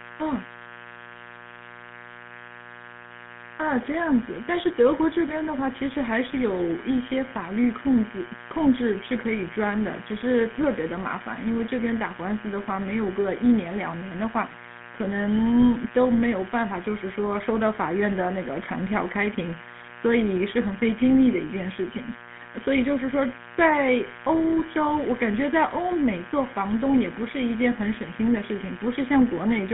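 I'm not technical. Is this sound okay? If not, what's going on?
No. A steady, raspy buzz sits under the speech from start to finish. That is mains buzz: electrical interference from the 60 Hz power supply, probably from a dimmer or poorly shielded cable, leaking into the recording and adding a harsh hum with many overtones.

The voice also sounds gravelly, rough and muffled all the way through, as if heard over an old mobile phone. That comes from the GSM full-rate codec, an early phone-network compression scheme that rebuilds the voice from a simplified model and keeps only sound between about 150 Hz and 3.5 kHz.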